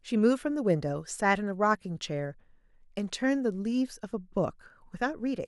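A speech recording, with nothing technically wrong with it.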